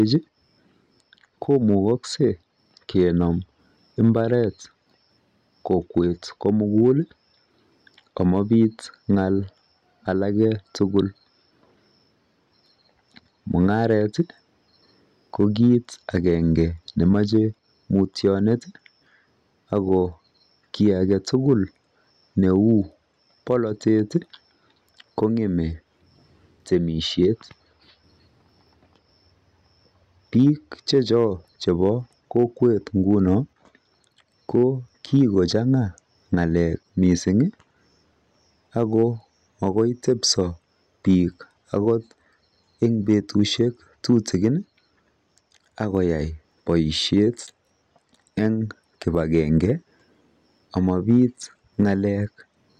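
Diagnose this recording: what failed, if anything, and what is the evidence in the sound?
Hard clipping throughout the speech: the loudest peaks get shaved flat, only about 1 dB over, a fraction of a percent of samples, so it's faint crackle on peaks at the converter or format stage.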